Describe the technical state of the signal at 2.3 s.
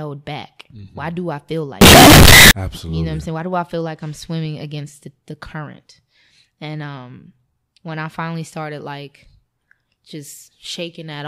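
At 2.3 s the speech sits inside a burst from 1.81 to 2.51 s that is very loud, harsh and nearly square at an almost fixed, high level, with background noise as loud as the speech while pitch stays traceable. The likely cause is float read as integer: 32-bit float samples taken as 32-bit integers, so sign and exponent bits set the level. Unlike ordinary clipping, quiet passages are flattened just as hard as loud ones.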